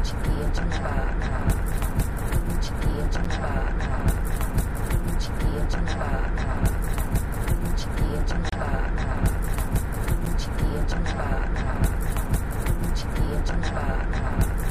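Block of digital silence appears four times in this recording of everyday sound, at 2.04 s (about 4 ms), 3.24 s (10 ms), 8.49 to 8.52 s (30 ms) and 10.25 s (10 ms). The audio cuts out and returns with no fade. The three short gaps register as ticks or dips, and the 30 ms one as a brief hole. Either the output buffer was not filled in time or a calculation produced invalid values.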